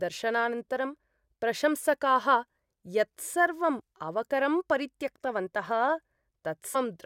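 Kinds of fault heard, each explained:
Damaged data in a compressed stream: corrupted frames make the decoder lose sync, giving brief glitches near 3.80 and 6.74 s, seen as thin broadband vertical streaks with waveform discontinuities.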